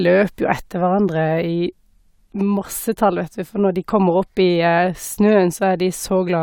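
No technical faults can be heard anywhere in the speech recording, and the signal holds steady throughout.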